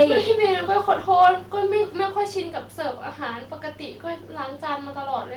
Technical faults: microphone overload; microphone volume stepped down

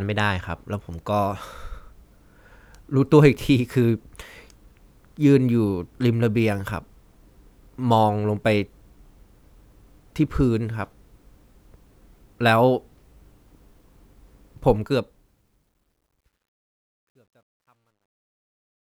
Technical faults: truncation distortion on a fade

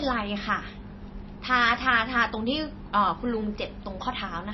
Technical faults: MP3 compression

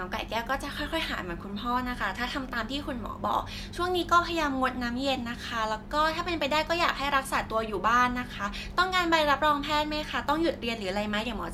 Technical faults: none

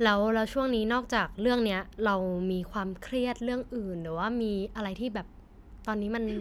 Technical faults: none

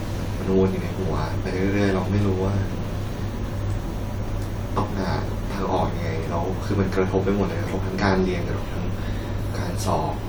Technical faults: none

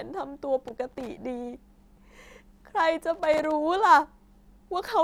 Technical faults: loose connector crackle

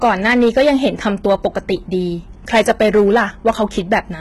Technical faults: hard clipping; HE-AAC compression

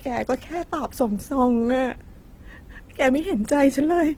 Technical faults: Opus compression

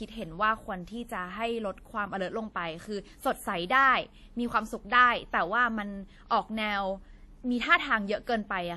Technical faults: transcoding between lossy codecs

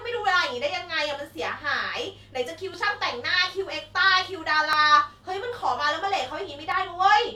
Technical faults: overlap between stream segments

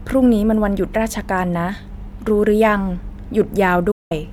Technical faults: digital broadcast dropout

